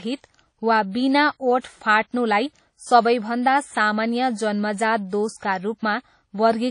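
Speech, carried throughout with plainly audible transform-codec damage: ringing, washy texture and a hiss that breathes with the signal, and nothing above 10.1 kHz. That points to WMA compression, likely at a low bitrate around 32 kbps, where weak spectral lines are zeroed. From 1.60 to 1.64 s, just before "फाट्नुलाई सबैभन्दा सामान्य", there is a pre-echo. A short hiss runs about 38 ms ahead of the attack and softens it, because the coding block spreads noise sized for the loud onset back into the quiet gap before it.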